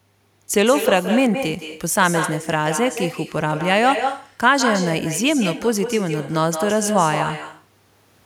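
Echo with no canceller throughout: the far-end loudspeaker leaks into its microphone unremoved, so speech returns roughly 150 ms later, about 7 dB quieter and thinner.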